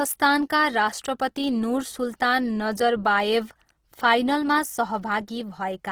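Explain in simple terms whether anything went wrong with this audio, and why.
The sound was most likely squeezed too hard by Opus compression, a format that shrinks audio files by throwing away detail. Here it was run in its music-style mode at a very low data rate, and the damage is plainly audible from start to finish. Rather than going dull, the speech keeps its full brightness, but its tones turn rough, grainy and noisy, as if sand were mixed into the sound.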